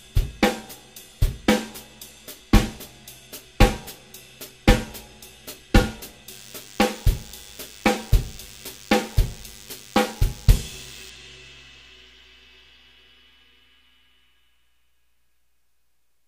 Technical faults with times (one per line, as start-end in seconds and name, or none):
6.31-11.10 DECT cordless phone buzz